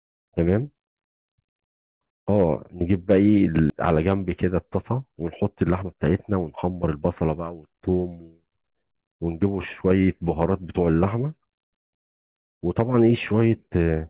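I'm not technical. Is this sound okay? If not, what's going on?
No, there are two glitches. At 3.70 s there's a skip ahead: about seven-tenths of a second of speech just vanishes, and the talking jumps straight to the later part with no pause, so a chunk seems to be missing.

Then from 5.55 to 7.02 s you get a jitter buffer speed-up. The system had too much audio queued and trimmed tiny slivers to catch up, about a fifth of a second in total. Speech runs 13% faster there, a bit rushed, though the pitch doesn't change.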